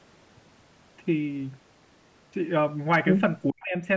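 A speech recording that passed through call microphone processing, with nothing above 8 kHz, shows speech suppressed in double talk from 3.49 to 3.74 s, where the level collapses by roughly 40 dB and the speech is turned down for about 300 ms in total. This is likely an echo canceller that could not tell the near-end talker from loudspeaker echo while both sides spoke, so it attenuated everything it picked up.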